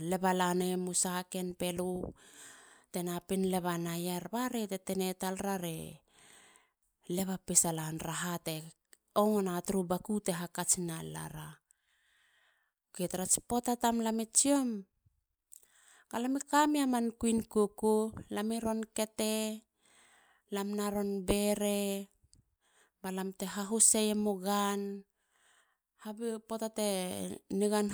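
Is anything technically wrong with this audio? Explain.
No, no technical faults detected.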